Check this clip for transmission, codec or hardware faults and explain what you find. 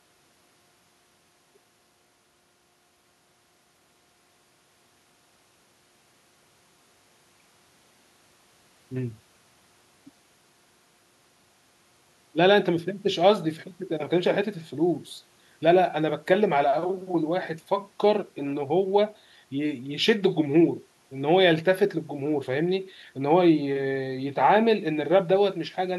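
No faults detected.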